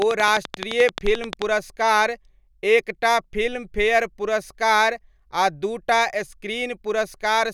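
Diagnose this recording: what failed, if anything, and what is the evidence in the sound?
A train of clicks runs from 0.02 to 1.43 s, ending just before "पुरस्कार एक टा फिल्मफेयर": about fifteen similarly shaped pulses at a steady 11.5 per second, standing well above the speech and audible in the gaps too. The stage is likely analogue wiring picking up interference from nearby equipment, or a faulty connection or power supply. The regular spacing and uniform shape, persisting through pauses, distinguish it from random crackle or dropouts.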